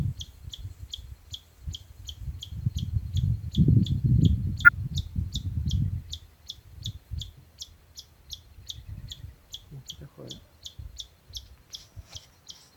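At 4.65 to 4.69 s, a corrupt frame is decoded. Bit errors damaged a few compressed frames, but the decoder played them anyway. Misread codes and gains push energy to the wrong frequencies. The result is a brief chirp, squeak, blip or burst of noise.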